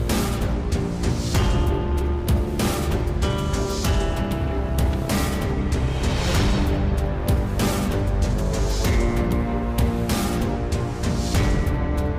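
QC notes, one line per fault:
No faults heard anywhere in the clip; nothing to flag.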